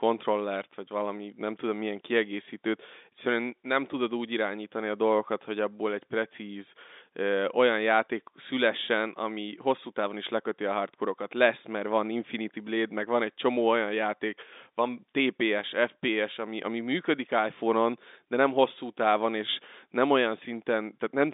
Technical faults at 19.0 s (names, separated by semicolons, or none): none